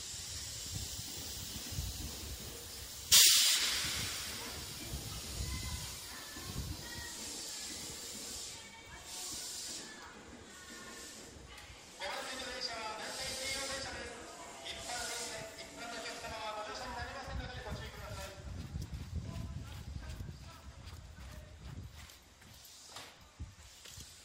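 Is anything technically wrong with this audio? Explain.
Yes. At 6.02 s, an overlap between stream segments removes about 11 ms where two segments' timestamps overlap. The waveform jumps, producing a brief click or skip.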